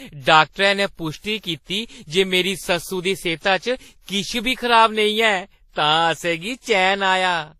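Speech carrying mixed lossy-codec artefacts throughout, with a spectrogram showing nothing above 16 kHz and smeared, blocky upper bands. This is likely transcoding between lossy codecs, consistent with a low-bitrate WMA-to-Vorbis chain.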